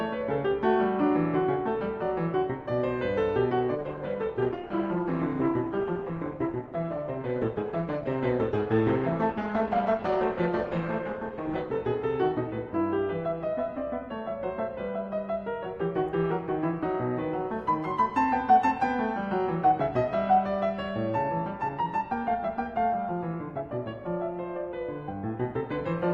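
Adaptive stream at a lower bitrate, 3.75 to 11.75 s: the music's codec artefacts abruptly rise, consistent with a fallback from about 64 to 16 kbit/s Opus, without any gap.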